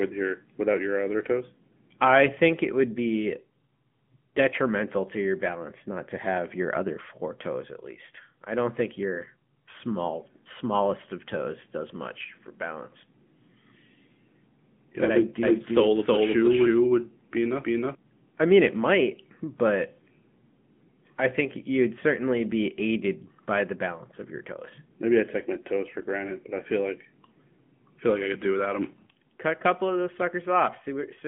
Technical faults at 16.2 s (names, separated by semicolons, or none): AMR narrowband mobile codec; doubled audio track